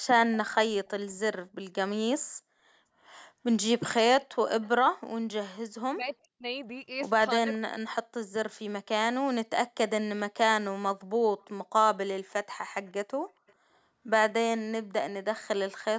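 A speech recording of a call with two recurring faults. Echo leak appears as brief, faint delayed copies of earlier speech at 4.61 to 4.69, 11.40 to 11.45, 12.86 to 12.92 and 13.47 to 13.53 s. Each arrives about 0.43 s after its source and sits roughly 30 to 35 dB below the speech. On a spectrogram these show as thin, low-energy smears repeating the formant pattern from just before. The likely cause is a loudspeaker on one end whose echo canceller let some of the played-back call reach the microphone. Speech suppressed in double talk occurs at 5.87 to 6.44 s and 7.47 to 7.74 s. There the voice drops sharply, by roughly 40 dB at its deepest, across about four tenths and two tenths of a second of those spans. In the waveform the envelope collapses into near-flat gaps, and the spectrogram shows the speech energy blanking out in patches. This is likely the echo canceller attenuating everything while both sides spoke at once. 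Throughout, the spectrum stops at 8 kHz, consistent with normal call microphone processing.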